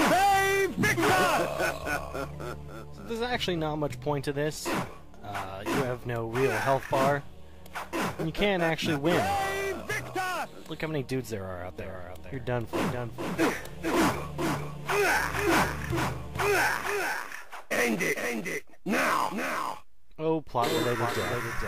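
A doubled audio track begins abruptly at 11.78 s and runs to the end: a second full-band copy of the sound trails about half a second behind, roughly 5 dB quieter, with no decay or room colour. It is likely a second capture through a slower path.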